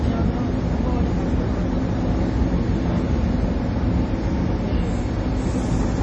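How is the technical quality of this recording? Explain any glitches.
Heavy MP3 compression runs throughout the sound, likely from a low-bitrate encode around 32 kbps. The encoder likely cut everything above about 9.9 kHz and dropped weak frequency lines frame to frame, leaving a dull, watery, swirling texture with smeared attacks.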